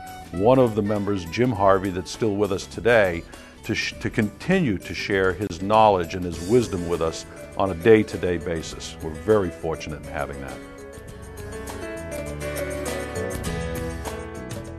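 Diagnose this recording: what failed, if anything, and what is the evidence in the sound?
A brief dropout from 5.47 to 5.50 s, an about 28 ms gap with smeared edges: a gap at a join of encoded pieces, from untrimmed encoder delay and padding.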